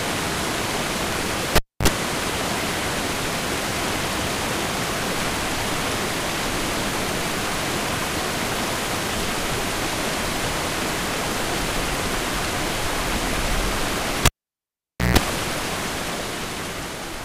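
At 1.56 s a cable pulled and plugged in interrupts the audio: a pop, then about 273 ms of near silence with a 48 ms burst of 50 Hz mains buzz as only the plug tip makes contact, and a second pop when the signal returns at 1.88 s. The same fault recurs from 14.25 s to 15.17 s, with a longer 867 ms dropout and 147 ms of 60 Hz buzz before the closing pop.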